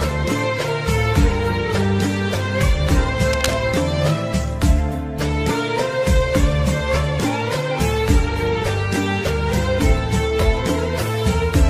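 From 3.33 s to 3.54 s, for roughly a fifth of a second, a dense, uneven burst of scratching and rustling sits over the sound at around 10 dB below the signal. This is cable scratch noise. The likely cause is a worn cable, connector or control being moved. Its contact resistance fluctuates rapidly, so the signal path intermittently loses and regains a clean connection. The result is irregular crackle layered on the audio rather than a steady hiss.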